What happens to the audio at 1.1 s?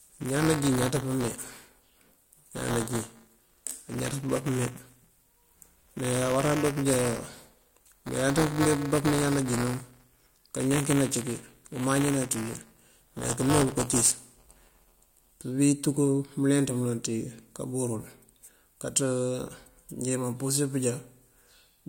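At 1.1 s the speech is in the middle of buffer tearing, which runs from the start to 15.32 s. Writer and reader have slipped, so a small slice of each buffer replays audio roughly 15 ms old, giving a robotic 200 Hz buzz. The waveform shows hard steps every 5 ms, and the spectrogram shows matching vertical striations.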